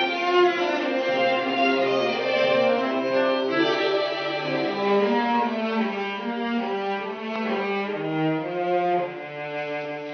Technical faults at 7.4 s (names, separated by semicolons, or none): loud pop